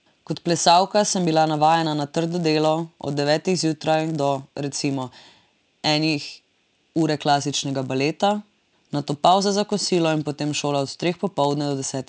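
From start to end, the speech carries a steady buzz at 100 Hz that sounds only while the voice is present and stops in the pauses. This is a resampler restarted on every block: each 10 ms block was converted in isolation, which fits a 48 kHz to 16 kHz conversion, so the filter saw silence or wrapped samples at every block edge. Each edge leaves a small error, and their regular repetition forms the buzz.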